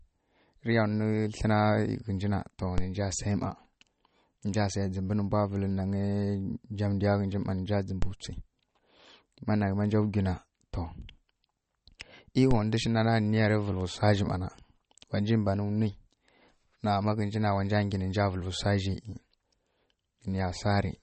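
From the first second to the last, the speech has a watery, swirly quality, and nothing comes through above about 8.4 kHz. That's likely MP3 compression at a low bitrate, somewhere near 33 kbps judging by the sound. With so few bits, the encoder drops the weaker frequency lines, which flicker on and off between frames. That flicker is the swirl, and the damage is plainly audible. The fixed treble cut-off also takes the air off the speech.

Then there are three DC steps, at 2.78 s, 8.02 s and 12.51 s. Each time, the waveform's zero line jumps suddenly, as if an offset input got switched in or a converter recalibrated. You hear a low thump or click while the speech carries on unchanged. The offset doesn't stay put. It decays away the way a 5 Hz high-pass would drain it, so each thump settles back rather than leaving a lasting shift.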